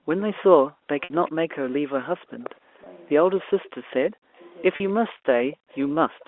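Throughout the clip, from 0 to 6.27 s, the talker's level keeps sagging and in places breaks up into pieces, dropping by as much as about 40 dB, for roughly two seconds in all. The cause is likely speech suppressed in double talk: with both ends talking at once, the echo canceller could not tell this voice from its own loudspeaker echo and pulled everything down together.

From 0.2 to 3.7 s a faint second copy of the voice trails the original by 241 ms, about 25 dB below it. This is an echo leak, likely from a far end on loudspeaker whose canceller let part of the microphone pickup through and sent it back.

At 1.04 to 1.10 s the sound briefly holds on a buzzy tone that fades into silence within the 60 ms gap, and speech then returns with a short cross-fade; shorter versions follow at 2.84 to 2.86 s (20 ms) and 4.76 to 4.80 s (40 ms). This is packet loss with pitch repetition. The receiver filled each gap by looping the last pitch period. 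The lengths fit losses of one to three 20 ms packets, and the longest gap outlasts the roughly 50 ms fade of the repeated tone.

From 5.51 to 6.25 s the same 241 ms echo leak returns, weaker at about 30 dB under the speech.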